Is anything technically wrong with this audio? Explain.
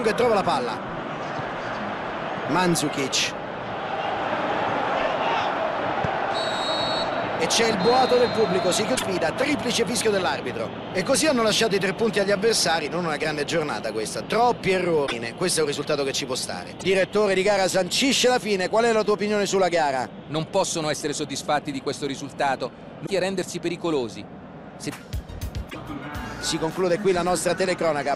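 Yes. The audio has damaged data in a compressed stream. Five brief glitches occur, at 8.94, 15.04, 16.77, 23.03 and 25.69 s. Each lasts roughly 60 to 90 ms. At these points the encoded bytes are corrupt, so the decoder cannot read those frames correctly. It loses its place and hunts for the next valid frame header before normal playback resumes. Each event is heard as a short chirp, squawk, click or brief hole that breaks into the sound.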